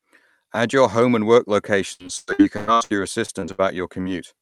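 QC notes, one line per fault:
1.93–3.60 s, repeated packet loss (robotic sound): starting just after "your home and work", the audio breaks up into a run of eleven gaps, the longest about 0.11 s, totalling roughly 0.6 s of missing signal. The receiver bridges each hole by extending the preceding sound, so about 37% of this stretch is synthesised continuation rather than real audio. Because one patch follows closely on another, the result is choppy and robotic, with fragments dropped out.
4.02–4.07 s, short concealed packet loss: about 20 ms of audio failed to arrive in time, and the decoder filled the hole by carrying the last sound forward, continuing its pitch if voiced or substituting shaped noise if not, before blending back into the real signal. Heard as a brief smear or wobble, it is short enough that only a fleeting sound at this point could be lost.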